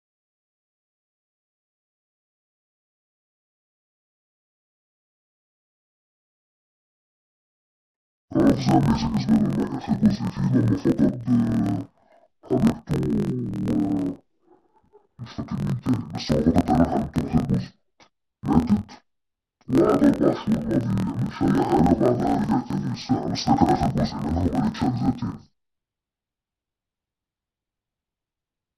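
From start to finish, the speech suffers from interleaved audio read as planar. Each roughly 24 ms block's alternating samples are split into halves played together at half speed, dropping pitch an octave and leaving doubled, choppy sound that flutters at 41.7 Hz.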